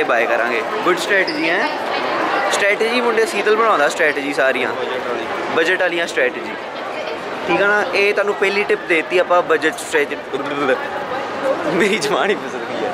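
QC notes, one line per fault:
9.95 s: corrupt frame decoded. A couple of damaged compressed frames were played anyway, causing a brief glitch near -15 dBFS. It appears as a thin vertical smear of misplaced energy on the spectrogram.
12.01–12.03 s: corrupt frame decoded. A few frames were decoded with flipped bits, producing a louder glitch near -10 dBFS. It shows as a short streak of misplaced energy and a waveform spike.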